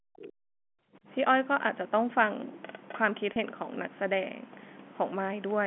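From the start to 1.07 s, the echo canceller was likely caught in double talk, with both ends speaking together. Unable to tell the near talker from the loudspeaker echo, it pulled the whole microphone signal down. For roughly a second the speech sinks and recovers unevenly, dropping by as much as about 40 dB at its deepest, so stretches thin out or vanish in pieces before the level returns.

Between 0.21 and 0.31 s, residual echo from the far end likely escaped the canceller and passed back through the microphone, which is the other side's voice leaking through. It is a brief, faint scrap of a second voice, around 20 dB below the main talker, sitting underneath the suppressed speech for about a tenth of a second.

At 3.33 to 3.36 s, about 30 ms of audio went missing, which fits a single lost packet, and the receiver filled the gap with packet loss with pitch repetition, repeating the last pitch cycle instead of leaving silence. 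Because the gap is so short, no fade to silence occurs. The sound is a momentary held, slightly buzzy sustain on the speech before normal audio resumes, heard through the 200 to 3400 Hz telephone band of the G.711 line.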